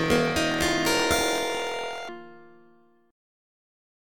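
From 0.0 to 2.09 s, planar audio read as interleaved: 24 ms blocks of left-then-right samples are taken as alternating pairs, so each half plays at double speed. The sound jumps an octave up with a 41.7 Hz flutter, showing on a spectrogram as doubled harmonics striped every 24 ms.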